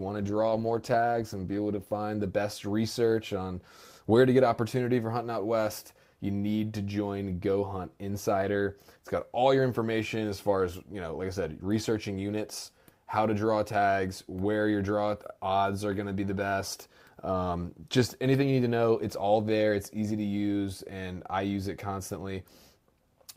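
Until 2.0 s, an adaptive stream starting at a low bitrate leaves the speech dull and smeary, consistent with roughly 16 kbit/s. Clarity then jumps up with no gap or dropout.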